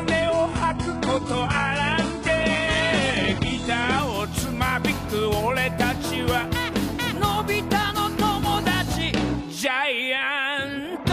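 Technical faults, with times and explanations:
0.0 to 4.0 s, adaptive stream starting at a low bitrate: nothing above 11 kHz and stronger codec artefacts, which fits a 12 kbit/s HE-AAC start, then a sudden, gapless jump to fuller sound.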